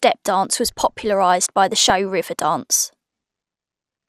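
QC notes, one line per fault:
throughout: MP2 compression, likely at a rate around 80 kbps. The speech sounds dull and granular, with a gurgling edge. Too few bits reach the upper sub-bands, so they drop out and flicker. The bands that remain are coarsely quantised, which adds that rough grain.
1.75–1.90 s and 3.75–3.89 s: DAB burbling. Both bursts put short blips of noise over the speech. Bit errors slip past error correction into the audio data. Wrong samples then put these blips into single sub-bands.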